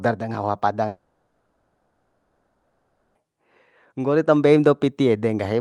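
A speech clip with one long gap. At 0.87 s the speech stops and the last sound is stretched into a buzzy hiss that fades out. By 3.17 s about 2.3 s has been filled this way. It never drops to true silence. Speech then resumes, but the missing stretch is gone. This is likely a long network dropout, concealed by the receiver. The call path limits the top end to about 12 kHz, which fits Opus at around 32 kbps.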